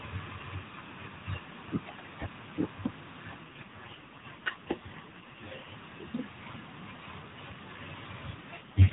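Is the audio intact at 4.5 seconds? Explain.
No. An AMR rate drop runs from about 3.4 to 5.8 s, so 4.5 s falls inside it. On a narrowband AMR mobile call, a weak radio link makes the network switch the codec to a lower rate and spend the freed bits on error protection. Here the sound points to a fall from 12.2 kbps to about 4.75 kbps. The band stays capped below 4 kHz and nothing drops out, but the speech turns rougher, buzzier and more synthetic until the rate recovers.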